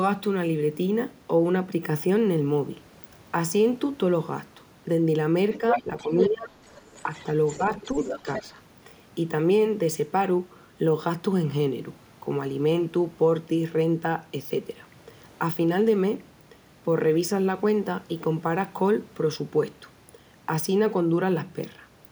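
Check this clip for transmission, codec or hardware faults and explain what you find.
Two echo-related faults appear, both between about 5.5 and 8.4 s of this speech clip.

Other side's voice leaking through occurs from 5.51 to 6.29 s and again from 6.65 to 8.42 s. A second voice sits under the talker, about as loud as the speech in the first stretch and about 10 dB below it in the second. The likely cause is loudspeaker playback of the far end reaching the microphone and surviving an echo canceller that did not fully cancel it, so the remote talker is re-sent.

Speech suppressed in double talk runs from 5.58 to 6.54 s and from 7.58 to 8.44 s, overlapping the leakage. In the first span, the talker's level dips by up to roughly 15 dB, affecting about 0.7 s of it. In the second, the dip is only a few dB and lasts about a fifth of a second. This is likely the canceller's suppressor treating simultaneous speech from both sides as echo and attenuating the whole signal, which pulls the local voice down along with the residual echo.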